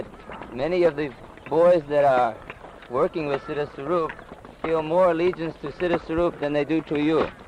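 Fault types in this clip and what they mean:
No technical faults are audible.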